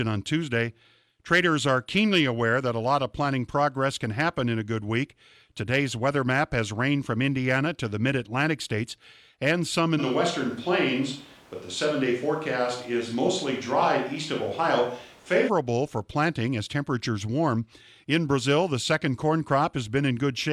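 From 10.01 to 15.47 s the speech suddenly turns roomy, hollow and thin. This is likely a switch to a distant microphone. Loudness stays about the same.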